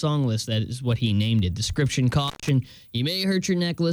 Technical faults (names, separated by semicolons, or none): intermittent contact